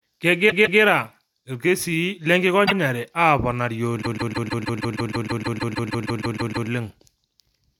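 A stutter at 0.49 to 0.80 s plays a 157 ms slice of speech twice more. At 2.65 to 2.73 s a shorter 78 ms slice repeats once. From 4.01 to 6.68 s a 157 ms slice loops seventeen extra times, adding about 2.66 s. These are repeated frames: a run of compressed frames was written or sent again, and the decoder replays it. The block lengths fit runs of six and three frames.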